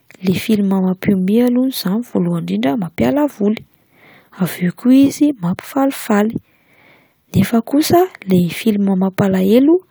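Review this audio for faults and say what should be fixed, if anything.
Nothing stood out on listening, so there is nothing here that calls for a fix.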